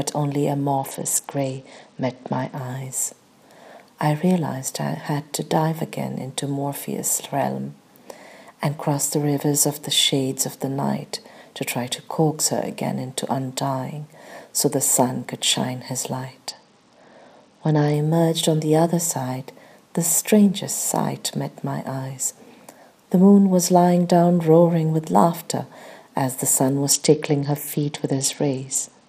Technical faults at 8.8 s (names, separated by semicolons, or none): none